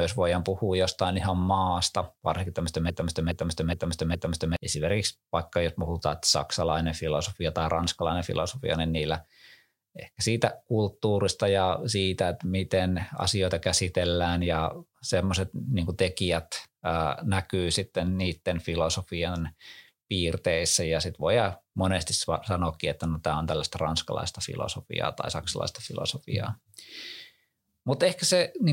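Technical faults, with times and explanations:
2.90–4.56 s broken-record loop. After "ihan maasta varsinkin tämmöistä", a 0.42 s fragment repeats four times back to back. Likely a stalled stream resending its last piece. The speech in between is lost.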